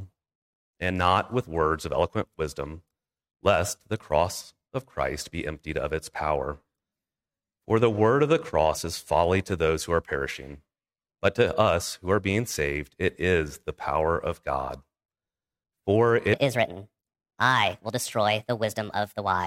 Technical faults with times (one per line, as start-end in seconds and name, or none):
16.33-19.46 section at the wrong speed